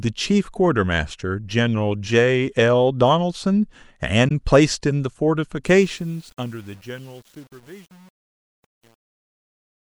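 A corrupt frame decoded appears at 4.28 to 4.31 s. Flipped bits in a single compressed frame were played as if valid, so energy landed at the wrong frequencies for that frame's length. The result is a short, fairly loud glitch peaking around -10 dBFS.

Truncation distortion on the fade begins at 5.67 s and runs to the end, during the fade-out. The level was cut down without dither, leaving too few steps, a coarseness that fits 8-bit truncation. From 6.06 s onward the decaying speech turns gritty.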